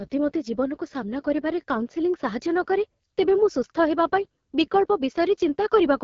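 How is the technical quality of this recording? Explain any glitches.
The speech sounds rough and raspy from start to finish, with nothing above about 7.3 kHz, so the recording's technical quality is noticeably compromised.

Throughout, this is AMR wideband (HD Voice) codec damage. The codec rebuilds the voice from a pulse-excited vocal tract model up to 6.4 kHz and pads the top band with shaped noise. The plainly audible coarseness fits one of its lowest modes, around 8.85 kbit/s.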